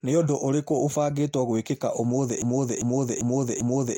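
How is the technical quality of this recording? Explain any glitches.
The recording is marred by one clear fault at the end. From 2.42 s to the end, a broken-record loop repeats one 0.4 s fragment four times, likely a stalled player resending its last buffer; waveform and spectrogram show identical blocks tiled.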